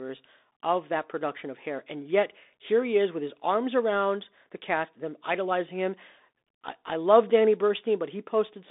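From start to finish the speech carries the Bluetooth CVSD headset codec sound: band-limited to roughly 250 Hz–3.7 kHz, nothing above 3.8 kHz. One-bit delta steps, fitting a 64 kbps link, lag loud high sounds, leaving scratchy s sounds and granular hiss.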